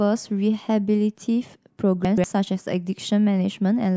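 At 2.05 to 2.24 s, chunks out of order: a 64 ms block plays two chunks late, after the blocks that should follow it. The sound jumbles briefly, and a waveform or spectrogram shows three abrupt discontinuities, vertical broadband lines, at the misplaced joins.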